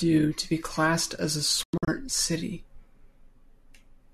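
From 1.63 to 1.88 s the speech drops out in several short holes, a digital broadcast dropout. The receiver muted on failed frames, losing about 168 ms of programme within that 240 ms span, the longest gap 96 ms. Each cut fades within 3 ms, showing as near-vertical edges and blank spectrogram columns.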